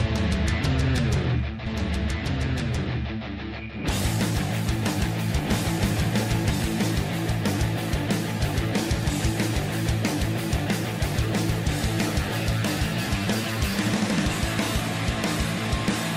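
A doubled audio track runs from 1.66 s to 6.50 s: a second, full-band copy of the sound trails the original by about one and a half seconds, roughly 5 dB quieter. The likely cause is the same signal reaching the mix twice, once directly and once through a slower path or a misaligned edit. The copy has no decay or room colouring, and it cuts in and out abruptly at both boundaries.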